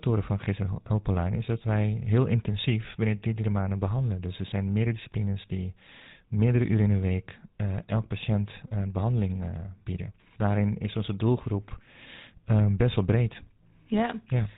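From start to finish the speech passes through the GSM full-rate codec, and the damage is plainly audible. Everything above 4 kHz is gone, and the coarse pulse-train excitation leaves a buzzy, gravelly roughness on the speech. The rate points to 13 kbps.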